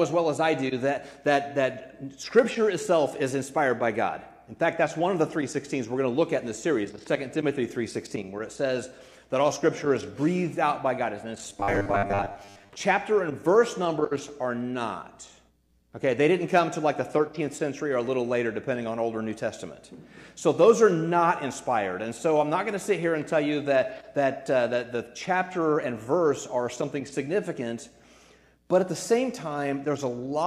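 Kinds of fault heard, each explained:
Robotic sound from repeated short buffers: from 11.50 to 12.73 s the sound turns into a rigid, metallic buzz fixed at 100 Hz, likely because fresh audio arrived too seldom and playback kept looping a segment of about 10 ms to fill the gaps, so roughly half of what was heard there was repetition. Unlike a stutter or dropout, nothing goes silent; the steady forced pitch is the giveaway.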